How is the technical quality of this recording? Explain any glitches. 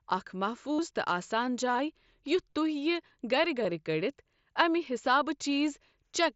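The recording has concealed Bluetooth headset packet loss at three points. The wideband headset band tops out near 8 kHz. At 0.73–0.79 s (60 ms), 2.50–2.53 s and 3.64 s, lost radio packets were patched by repeating recent waveform. The longest gap gives a buzzy, full-level tone with a warble on recovery. Unlike a dropout, the gap is not silent.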